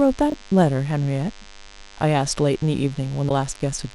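Throughout the speech runs a DECT cordless phone buzz: a thin, steady 100 Hz tone rich in harmonics, sitting roughly 25 dB below the speech. It comes from a nearby handset or base emitting radio bursts every 10 ms, which the audio circuitry rectifies into sound.

From 0.30 to 0.34 s there are chunks out of order. A 20 ms block of audio arrived one chunk late and plays after the block that should follow it. The result is a brief jumbled moment.

At 3.28 to 3.31 s the audio skips forward and the following instant breaks into a short garbled chirp or noise burst. This is likely a broken MP3 bit reservoir: after frames of about 26 ms were dropped, the next frame read borrowed data from the wrong frame.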